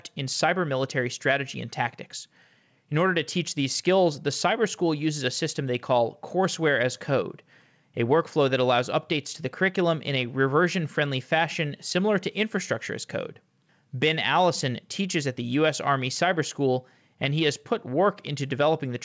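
Nothing goes wrong anywhere in this one: the speech just arrives over an ordinary call link, and since nothing comes through above 8 kHz, which fits G.722 at 64 kbps, that missing top end is simply how that path normally sounds.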